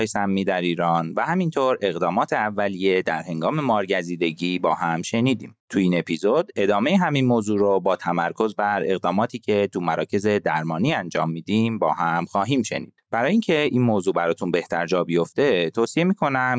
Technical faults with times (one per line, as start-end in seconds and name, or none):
0.00-16.58 gain pumping